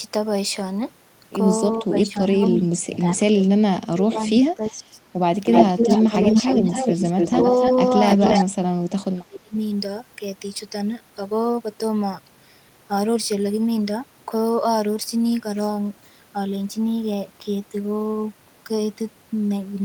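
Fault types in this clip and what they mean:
Speech suppressed in double talk: the echo canceller likely mistook overlapping talk for echo and ducked it, so the speech dips by up to about 35 dB or breaks into pieces.
Echo leak: the far end's echo canceller likely let loudspeaker pickup through, so a copy of the speech returns about 293 ms late, at roughly the same level or about 5 dB below it.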